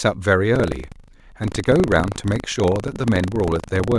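From 0.52 s right through to the end, there's buffer tearing. The writer and the hardware reader on the ring buffer have drifted so they cross inside every period, and each time a small slice, well under a tenth, gets filled with audio from roughly 70 ms earlier, with hard joins either side. It comes across as a steady robotic rattle at 25 Hz riding on the speech, a buffer every 40 ms.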